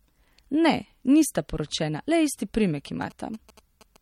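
Speech with plainly audible watery, swirling artefacts throughout and nothing above 16.6 kHz, a fixed treble ceiling that points to MP3 compression at a low bitrate, likely around 48 kbps. The warble comes from weak frequency lines being dropped frame to frame, unlike the steady band-limiting of an analogue filter. From 2.63 to 3.97 s, GSM signalling bursts add a galloping dit-dit-dit of short buzzes at 217 Hz, a nearby phone's radio bursts rectified by the audio circuit. The broken rhythm, rather than a steady tone, and the 217 Hz pitch, not 50 or 60 Hz, set it apart from mains hum. It sits well below the speech.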